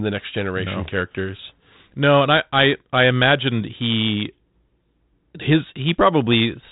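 No faults are audible.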